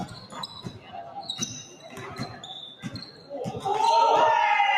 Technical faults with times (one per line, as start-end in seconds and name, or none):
0.00-4.78 noise suppressor applied to music or sounds
0.08-1.20 sound cut by the noise suppressor
1.65-1.99 sound cut by the noise suppressor
2.28-2.44 sound cut by the noise suppressor
3.08-3.31 sound cut by the noise suppressor